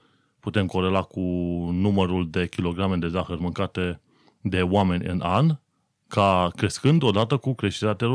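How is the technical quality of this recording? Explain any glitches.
Nothing in this speech recording stands out as a glitch, so there's really nothing here that needs explaining.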